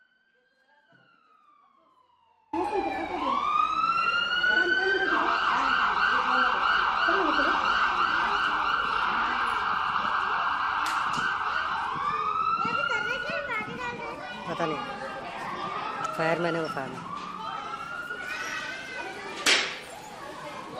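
The clip opens in the middle of an audio dropout to a faint residue. From the very start until 2.53 s, the wanted sound is missing. Only a faint leak remains, roughly 35 dB below its normal level. At 2.53 s the full signal returns abruptly, with no fade. The cause is likely a brief loss of the source while the path after the break stayed live, so a weak trace kept passing through.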